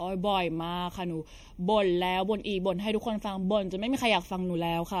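Speech fills the whole clip, and two faults run from start to finish. The first is channel delay, heard as comb filtering. One channel lags the other by roughly a third of a millisecond. When the two are summed, the shared sound cancels at regular intervals. The first deep notch sits around 1.5 kHz, with further notches higher up at even spacing. The result is a hollow, phasey tone that never moves. The second is generation loss. The audio sounds swirly and smeared, and consonant attacks blur. It is more hollow than a single pass through a lossy codec would leave it. That points to MP3 at a low rate, around 64 kbit/s. The likely cause is repeated decoding and re-encoding, roughly three times. Each pass quantised on a fresh frame grid, so noise and spectral holes stacked up.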